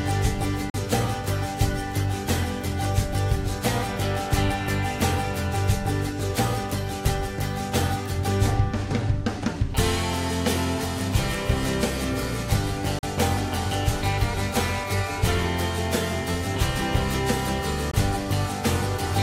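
Brief silent holes open at 0.70 to 0.74 s, 12.99 to 13.03 s and 17.91 to 17.94 s. Their edges are abrupt or fade over a few milliseconds. Each is likely a Bluetooth dropout. Packets arrived too late and were discarded, losing about 40 ms twice, then 20 ms. Sound resumes further along, as if it had played on.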